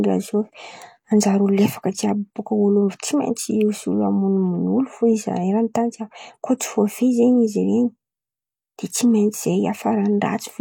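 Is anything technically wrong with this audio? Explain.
Yes. Pre-echo at 3.35 s: a transform codec spreads quantisation noise across a whole block, so when a sharp attack in the speech lands late in that block, the noise sized for the loud onset also fills the quiet moment just before it. Here it smears about 12 ms ahead of the attack, heard as a brief hiss leading into the onset, which loses its crispness and sounds softened.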